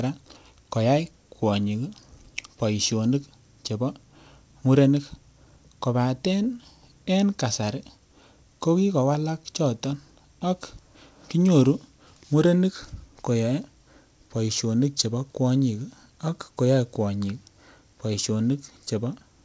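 Nothing stood out on listening to the speech, which comes through a call path whose G.722 coding leaves nothing above 8 kHz.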